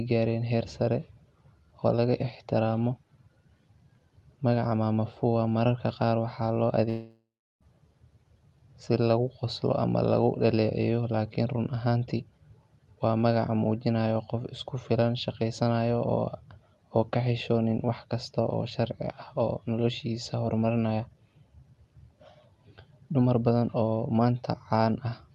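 At 6.89 s the speech stops and a fading buzz takes its place. That tail thins out over a few tenths of a second. Near-silence follows, lasting about a third of a second. Speech resumes at 7.63 s, with roughly 0.72 s of it simply gone. The likely cause is a long network dropout. No audio arrived, so the receiver stretched the last sound, then gave up. Around it, the call codec's top end stops near 12 kHz.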